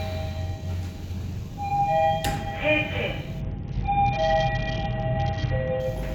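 From 3.41 s to 5.8 s the sound turns dull and gritty: the treble falls away and a coarse, grainy noise rises. This is a Bluetooth SBC bit pool drop. The link squeezed the encoder to far fewer bits, consistent with the bit pool falling from about 28 to 7 (around 66 kbps), so the upper sub-bands were starved and the rest coarsely quantised until the rate recovered.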